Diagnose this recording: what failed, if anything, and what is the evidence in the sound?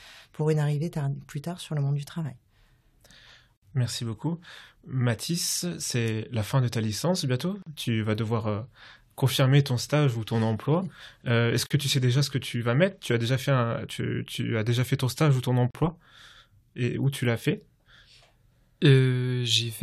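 The speech drops out at 3.57 s for 59 ms, then for 40 ms at 7.62 s, 11.66 s and 15.71 s: a gap at a join of encoded pieces, every 4 s. It's the codec stage. Separately encoded chunks were butted together untrimmed, leaving encoder delay and frame padding in.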